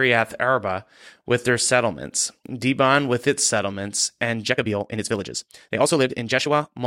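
From 4.31 s to the end at 6.87 s, the speech suddenly rushes at the same pitch: a time-stretched section, likely sped up about 1.79 times.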